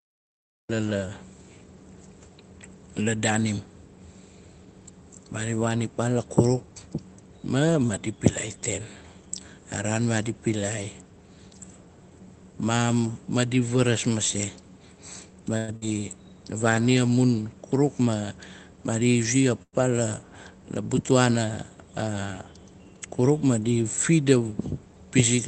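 The recording began late, so the speech opens from digital silence and starts abruptly mid-sound at 0.69 s, a cut-off start with no natural attack or fade-in, only a hard edge into the first sound.

At 15.57 s, packets were likely held up in transit and the jitter buffer ran dry. This call audio freeze was filled by stretching the last sound into a fading buzz or hiss for 108 ms until 15.70 s. The speech then resumes where it stopped, with a gap inserted but nothing lost.

Immediately after, from 15.76 to 15.87 s, a burst of packet loss drops 60 ms of speech outright. The receiver fills 54 ms by extending the previous sound as a decaying buzz or hiss, then jumps ahead, so a small piece of speech is skipped.

With the buffer then holding surplus audio, the receiver trimmed short pitch-period slices to catch up. This jitter buffer speed-up runs from 17.74 to 18.23 s at 109% speed and again from 18.93 to 19.46 s at 108%, removing roughly 50 ms each time. 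The speech sounds briefly hurried while its pitch stays unchanged.

A second call audio freeze follows at 19.63 s and lasts until 19.75 s. For 102 ms, the last sound is carried on and fades away, including about 50 ms of silence, before the speech continues intact from the point where it stopped.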